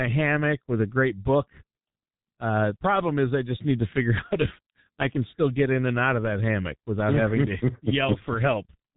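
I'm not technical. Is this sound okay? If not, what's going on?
No. The whole clip has gone through the G.723.1 codec, an old internet-phone format, and it is heavily damaged. Nothing above about 3.8 kHz survives, so it sounds muffled. Unlike simple muffling, consonants also smear and the voice turns hoarse and grainy.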